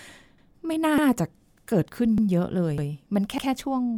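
Overlapping chunks appear at 0.38, 0.98, 1.58, 2.18, 2.78 and 3.38 s, each replaying about 100 ms (for example 0.38 to 0.48 s). The speech was handled in 0.5 s blocks, and each block began before the previous one had finished, so the tail of one block is played again at the start of the next. The result is a brief stutter with a click at each join, recurring steadily every 0.6 s.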